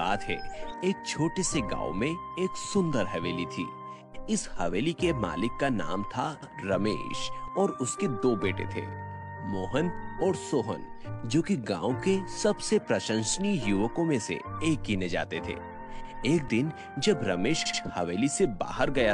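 Repeated frames make the sound stutter at 0.77, 6.42, 9.21 and 17.65 s. Blocks of 26 to 105 ms replay, the 78 ms one at 17.65 s twice.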